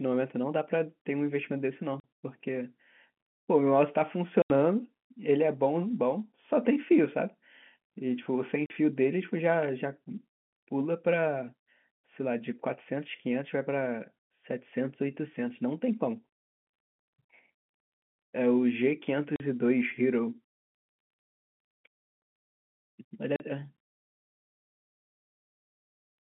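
Sharp holes punch through the speech at 2.00 s, 4.42 s, 8.66 s, 16.92 s, 19.36 s and 23.36 s, each a dead gap with hard edges. Most last 40 ms, but the one at 4.42 s runs 80 ms and the one at 16.92 s runs 60 ms. These are packet loss filled with silence: the receiver played zeros where the missing audio should be. All the gaps are whole multiples of 20 ms, which fits 20 ms packets. The sound stays within the narrow telephone band of G.711.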